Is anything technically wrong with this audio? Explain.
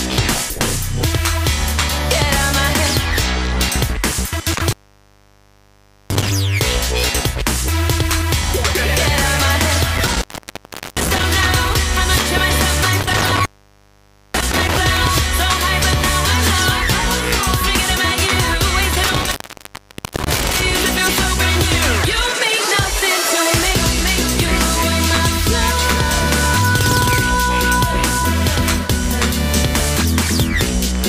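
Yes. Intermittent contact occurs four times: 4.51–6.31 s (open 1.38 s), 9.95–11.24 s (0.75 s), 13.0–14.78 s (0.89 s) and 18.92–20.68 s (0.92 s). A loose connection briefly breaks the signal path, so the sound drops to faint hiss with crackle at each edge. The waveform flattens to a thin noise floor between spiky edges, and the spectrogram shows a near-empty band bracketed by vertical broadband streaks.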